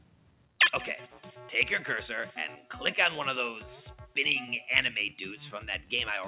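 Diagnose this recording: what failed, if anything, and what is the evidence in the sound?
The failure is in call processing: a noise suppressor applied to music or sounds was left active across the whole clip. It treats sustained and steady components as noise and attenuates them, while transients pass more intact, so the level rises and falls by roughly 5 dB throughout. The band stops at 4 kHz, consistent with the G.711 A-law call path, which sets the bandwidth and is not at fault.

Separately, there is sound cut by the noise suppressor from 0.00 to 0.55 s. Over roughly half a second at the start, the suppressor classified this sound as noise and pulled it down harder than the rest of the clip, with the deepest drop about 12 dB. The mechanism is the same gain reduction, but here the sound's steadiness or decay misled the noise estimate into much deeper attenuation.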